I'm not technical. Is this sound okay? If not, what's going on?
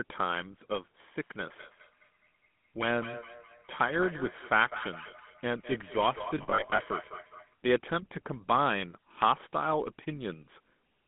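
No. Three separate problems can be heard.

The whole recording has the sound of the GSM full-rate codec, the compression used by early mobile phones. It rebuilds the voice from a rough model of the throat and mouth, fed with a coarse, pulsed signal. The result is plainly buzzy and gravelly. The lowest tones below about 150 Hz are missing, and so is everything above about 3.5 kHz. That makes it sound thin and muffled, like an old phone call.

From 1.21 s to 7.56 s there is feedback echo between two devices. Two phones or computers in the same room are on the same call. One plays the sound out loud, and the other's microphone picks it up and sends it back round. Each echo canceller only removes its own playback, so this loop slips through. The sound returns roughly every fifth of a second, quieter than the main speech.

Between 6.38 s and 6.79 s there are lost GSM frames. Small chunks of the signal went missing, about 0.22 s in total, scattered across that short stretch. 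The longest single gap was under a tenth of a second. For each gap the decoder repeated the last good piece. You hear this as a brief rough, metallic ringing rather than clean silence.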